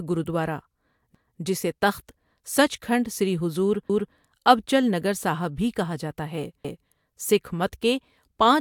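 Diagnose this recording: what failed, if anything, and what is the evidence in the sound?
A buffer or chunked-processing stage failed with overlapping chunks. At 1.15 to 1.40 s, just before "جسے تخت سچکھنڈ سری", a 250 ms stretch of speech plays twice, heard as a stutter. Each new 2.5 s chunk began before the previous one ended, so the overlap was replayed.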